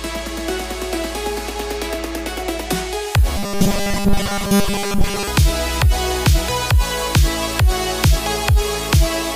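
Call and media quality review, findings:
Robotic sound from repeated short buffers, 3.37 to 5.28 s: the audio goes hard and metallic, with a fixed buzz at 200 Hz laid over it. That pitch matches a 5 ms chunk replayed back to back. Likely cause is starved playout or jitter buffer underruns, where the last fragment gets looped to fill the gaps. Roughly two thirds or more of that stretch is repeats, and the real audio is lost.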